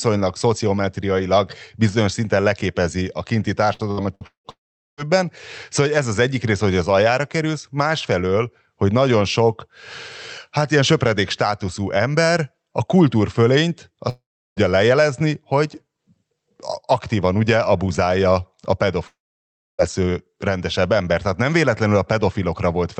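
Repeated packet loss, heard as robotic sound, runs from 3.73 to 4.47 s in this speech recording. Four short holes, the longest about 0.18 s, are patched by stretching the preceding sound, so nearly half that span turns choppy with fragments missing. Long network dropouts, the likely cause of three later breaks, follow at 4.50 to 5.00 s, 14.09 to 14.59 s and 19.07 to 19.81 s. In each, the last sound briefly carries on as a fading buzz or hiss before giving way to silence of roughly 0.42 s, 0.36 s and 0.64 s respectively. The audio then resumes without the lost portion. Throughout, the sound is band-limited to about 8 kHz, which fits a call codec such as Opus at a modest bitrate.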